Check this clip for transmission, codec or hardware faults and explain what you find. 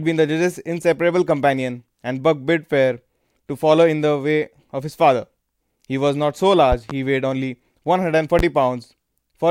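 Two loud pops interrupt the speech. The first, from 6.72 to 6.93 s, is a double pop. The second is a single pop at 8.39 to 8.42 s. Each peaks about 10 dB above the speech, which continues underneath. The likely cause is a sudden voltage spike, such as a plug, switch or static discharge, entering the signal path.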